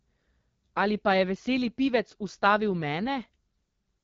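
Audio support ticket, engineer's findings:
AMR wideband (HD Voice) codec at a low mode, throughout. Sound points to roughly 8.85 kbit/s, one of the lowest rates. Pulse-excited vocal tract model underfed, so speech comes out rough and raspy; noise-filled top band, no content above 7.5 kHz.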